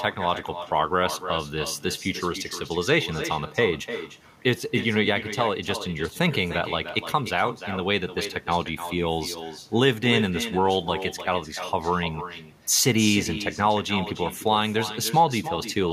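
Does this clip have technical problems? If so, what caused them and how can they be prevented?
Yes. Echo with no canceller runs throughout. The speech returns as a distinct copy roughly 300 ms later, about 11 dB quieter, rather than as a smooth reverberant tail. Enabling acoustic echo cancellation on the far end, or having that listener use headphones, would prevent it.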